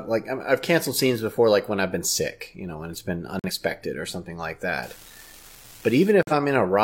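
A speech clip with two separate faults. The first is corrupt frame muted, heard at 3.39 to 3.50 s and again at 6.23 to 6.32 s. Each is a hole of about a tenth of a second that cuts in abruptly, with each length pointing to one lost compressed frame. The decoder rejected the damaged frame and the player substituted silence. It differs from a network dropout with concealment because nothing is smeared or repeated to fill the gap, and timing carries on unchanged afterwards. The second is an unreliable data bit, from 4.83 to 6.11 s: a steady crackling fizz made of spikes all the same size, because one marginal data line flips a bit in a random share of samples. Unlike codec noise or clipping, it doesn't follow the loudness of the speech and continues through the pauses at an even level.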